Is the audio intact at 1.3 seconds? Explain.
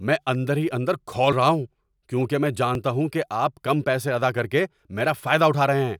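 No. At 1.32 s there is a sudden jump in the speech. It sounds like a dropped buffer (overrun). About 40 ms of audio is missing. The likely cause is samples overwritten by hardware before the program read them, so the two sides join directly without silence.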